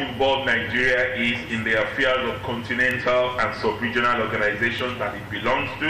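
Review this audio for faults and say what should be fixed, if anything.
Two bit error spikes at 2.91 s and 4.79 s, about -10 and -16 dBFS: a flipped bit leaves needle-thin waveform spikes and full-band spectrogram lines. Error-checked memory and CRC-protected digital links would catch this kind of corruption before playback.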